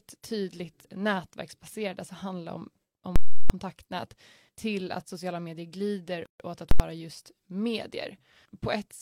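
At 3.16 s, a calculation produced invalid numbers that were clamped to full scale, pinning the output at its limit for about 0.34 s, a block that fits 16384 samples. It is heard as a very loud pop at 3.16 s and another at 3.50 s, with no sound between. The same fault returns at 6.71 s for a block of only about 85 ms, short enough to sound as a single bang.

Just before that, at 6.26 s, comes a gap at a join of encoded pieces: separately encoded sections were spliced without trimming the encoder's start-up delay and end padding. The speech drops out for about 142 ms with smeared edges, then resumes where it stopped at 6.40 s.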